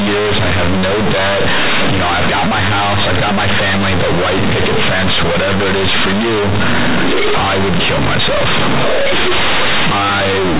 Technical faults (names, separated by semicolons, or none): companded audio read as linear